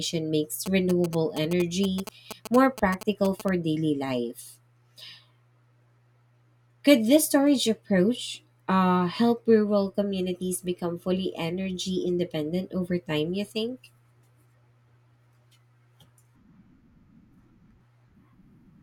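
From 0.66 to 3.49 s, just before "daily life", GSM signalling bursts cut through the speech. A nearby 2G phone is signalling the network in short groups of radio bursts. The audio circuit rectifies that RF energy into sound. The result is a galloping dit-dit-dit of short buzzes pulsing at about 217 Hz. It sits fairly loud, roughly 10 dB below the speech.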